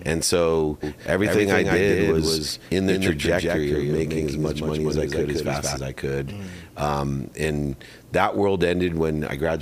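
From 0.83 to 5.77 s the audio carries a doubled audio track: a second, full-band copy trails by about 200 ms at roughly 5 dB lower, with no decay, then cuts off abruptly. A spectrogram shows every event repeated, shifted right; the waveform shows twin transients. Likely a second, slower capture path.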